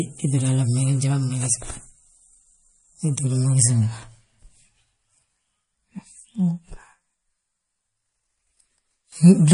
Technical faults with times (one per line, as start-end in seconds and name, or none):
0.00-9.54 MP3 compression